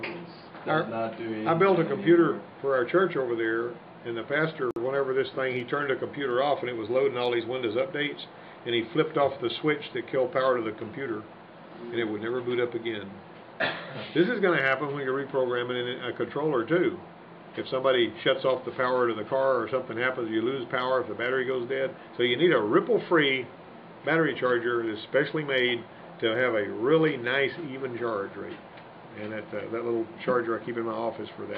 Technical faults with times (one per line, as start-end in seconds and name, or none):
4.71-4.76 gap at a join of encoded pieces